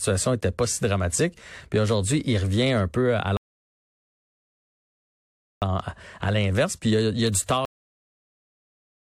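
At 3.37 s, right after "il revient un peu", the speech drops to silence and picks up again at 5.62 s from exactly the same point. This rebuffering stall adds about 2.25 s of dead air: playback ran short of downloaded audio and waited for more, without losing anything. At 7.65 s, just after "il y a du", the speech stops abruptly mid-sound and falls straight to digital silence with no natural decay. This cut-off end means the final buffers were never written or played out.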